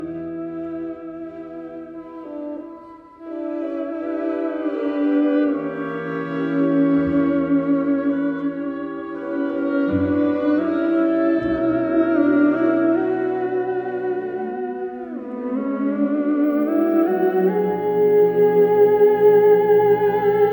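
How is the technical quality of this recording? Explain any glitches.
The recording has one clear glitch, a crude rate conversion from about 16.44 s to the end at 20.53 s. Over this stretch the sample rate was raised without a proper filter, in a way that fits a step from 32 kHz up to 48 kHz, with the nearest available sample repeated to fill the gaps. That uneven repeating repeats on a fixed 3:2 cycle and adds tones unrelated to the sound, roughly 30 dB below it, heard as a gritty, inharmonic fizz that follows the louder and brighter parts.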